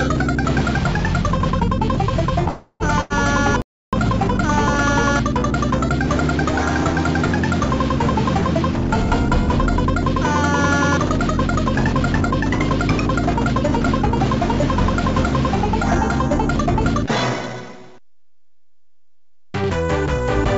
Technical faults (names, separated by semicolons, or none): call audio freeze; burst of packet loss; playback stall; jitter buffer speed-up